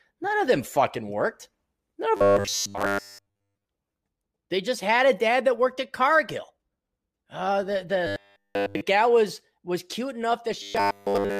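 From 2.17 to 3.65 s, 8.07 to 8.81 s (just before "was was cute") and 10.63 to 11.40 s (just after it), the speech becomes a rigid metallic buzz at 100 Hz: robotic sound from repeated short buffers, likely a 10 ms chunk replayed continuously while new audio was skipped.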